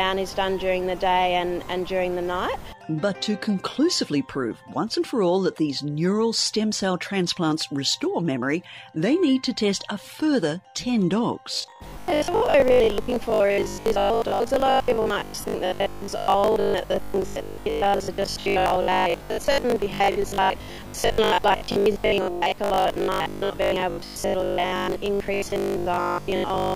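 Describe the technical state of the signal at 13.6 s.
At 13.6 s the sound carries robotic sound from repeated short buffers (11.54 to 26.74 s): a rigid 50 Hz buzz, likely from roughly 20 ms chunks looped over most of the audio, showing as evenly spaced harmonics and a repeating waveform.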